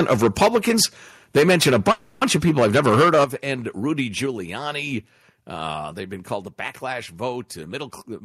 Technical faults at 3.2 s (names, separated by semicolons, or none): microphone overload; microphone volume stepped down